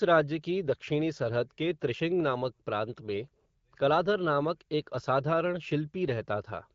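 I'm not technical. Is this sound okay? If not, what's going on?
Yes, this speech sounds fine; nothing is wrong here.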